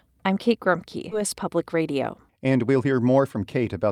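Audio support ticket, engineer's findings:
Skip ahead at 1.11–1.13 s: playback jumps forward with no fill, about 0.7 s of speech gone, sides butted together. Audio dropped in transit or by jitter buffer overflow discarding queued audio. Waveform shows an abrupt splice and discontinuity. Spectrogram shows harmonics changing instantly, with no silence gap.

Jitter buffer speed-up from 1.21 to 3.37 s: speech runs about 7% fast at unchanged pitch, hurried. Receiver trimming pitch-period-sized chunks repeatedly to drain the excess delay, about 150 ms in total. Spectrogram: harmonic spacing steady, syllables compressed in time. Waveform: periodic micro-splices.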